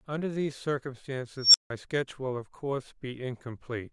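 At 1.37 s a high squeal around 5 kHz rises out of the speech over about 0.17 s, clips, then drops to 0.16 s of silence ending at 1.70 s. This is an unstable filter: recursive feedback ran away, overflowed, and muted until resetting.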